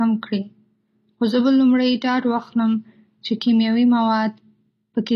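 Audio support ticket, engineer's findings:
Sibilants gritty, lispy; treble bright but synthetic, metallic edge, throughout. Likely HE-AAC compression: upper band rebuilt by spectral band replication, lower bands copied upward under a coarse envelope, harmonics misaligned at crossover. Plainly audible damage fits a low bitrate near 24 kbps.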